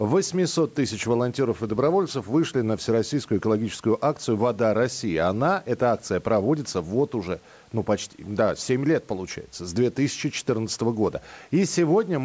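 No technical faults can be heard in the speech; it carries the ordinary sound of a call's microphone processing, with the lowest bass trimmed and nothing above 8 kHz.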